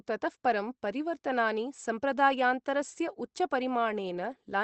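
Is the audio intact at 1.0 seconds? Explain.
Yes, the speech at 1.0 seconds is intact, with no dropout, glitch or other fault at that moment.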